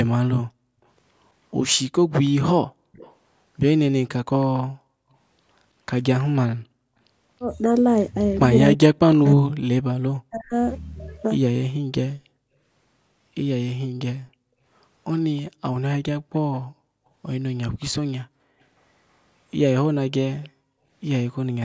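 At 0.48 to 0.82 s the room tone behind the speech is background gated by the echo canceller: while far-end audio played, the canceller pulled the microphone down hard, by about 37 dB at its deepest, for roughly a third of a second. The room sound simply vanishes and returns. On a spectrogram the noise floor shows as a dark vertical notch; on a waveform the low-level fuzz between syllables flattens to a near-straight line.

From 2.25 to 6.24 s there is an echo leak: a faint copy of the speech trailing 322 ms behind, about 25 dB below the direct signal, likely from a loudspeaker-side echo canceller that failed to remove everything its microphone heard and sent the remainder back. It sounds like a delayed repeat of the voice. A spectrogram shows each formant pattern repeated as a weaker smear a third of a second later.

Between 8.76 and 10.54 s the speech itself is suppressed in double talk. 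Both ends were talking, and the canceller, likely unable to tell the local talker from the loudspeaker echo, attenuated everything. Around a second in total is affected, with drops of around 40 dB, so the speech dips and breaks into pieces. The waveform envelope shows sudden collapses mid-phrase, and the spectrogram shows speech energy fading to near-black in vertical bands. Inside this stretch, at 9.25 to 9.30 s, another brief echo fragment leaks through at 322 ms delay, about 30 dB down.

A third echo leak runs from 14.26 to 16.59 s, quieter at about 35 dB below the speech but with the same 322 ms lag. It is heard as a doubling of the voice, and the spectrogram shows a faint, shifted shadow of each syllable.

Overlapping it, from 15.51 to 20.89 s, the background is gated again, with dips adding up to roughly 0.7 s, the deepest about 38 dB. The background sound drops away and returns, and the spectrogram shows dark gaps in the noise floor. 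A last short echo fragment appears at 20.42 to 20.49 s, about 30 dB down.

Throughout, the spectrogram is empty above 8 kHz, a normal limit of the call's microphone processing.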